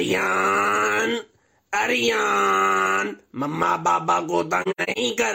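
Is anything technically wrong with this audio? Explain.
Yes. From 4.62 to 4.98 s there is AAC frame loss with muting. Compressed frames went missing, and the decoder filled each one with silence by zeroing its spectrum. About 213 ms of sound vanishes in several gaps scattered across roughly 340 ms, which fits five lost frames, the longest gap lasting about a tenth of a second. The overlapping transform windows fade the sound out and back in, so each hole has soft edges. A spectrogram shows full-band blank columns with tapered sides, and the waveform shows the envelope sloping down to near zero.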